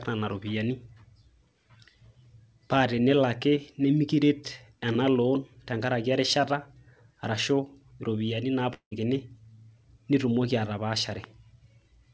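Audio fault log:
8.74 to 8.93 s, long network dropout: about 0.18 s of speech is lost. The receiver first stretches the last sound into a fading buzz lasting about 0.17 s, which sinks into about 0.1 s of near silence. Speech then resumes further on, with the missing part skipped. The likely cause is a run of packets that never arrived, so concealment extended the last sound until it ran out. The call's band limit, with nothing above 8 kHz, continues across the gap.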